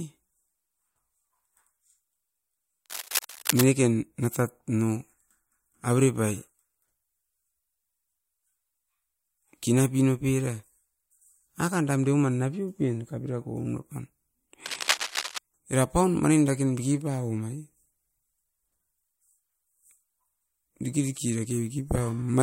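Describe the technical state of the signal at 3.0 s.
Cable scratch noise, 2.86 to 3.66 s: likely a worn connector's rapidly shifting contact resistance, adding dense, uneven scratching bursts nearly as loud as the speech.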